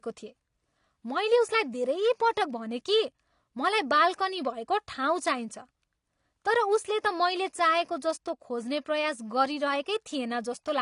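From start to end, the speech carries AAC compression damage: nothing sounds above 10.5 kHz, leaving it dull, while sibilants turn fizzy and sustained sounds warble. The likely cause is AAC-LC coding starved of bits, consistent with roughly 32 kbps, coarsely quantising frequency lines and dropping upper bands.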